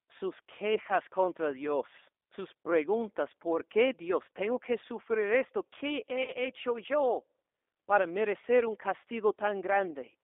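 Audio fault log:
Throughout: G.729 codec. The audio is confined to a narrow telephone band of roughly 300 Hz to 3.6 kHz, with nothing on top, and the damage from the codec is plainly audible. The decoder rebuilds speech from a vocal tract filter, a pitch predictor and a few pulses per frame instead of the real waveform, which leaves it intelligible but rough and slightly synthetic. The sound fits the 8 kbit/s G.729A variant.
4.36 s and 6.23–6.35 s: VoIP packet loss concealed by the speech codec. About 20 ms of audio is lost just before "que sufrir esto", which points to a single dropped packet, and about 40 ms is lost before "hecho yo", which fits two in a row. The decoder covers each gap by extending its last pitch and filter at falling gain, producing a brief stretched sound that fades. Because each frame builds on the one before, the speech stays weakened for tens of milliseconds or more after packets return.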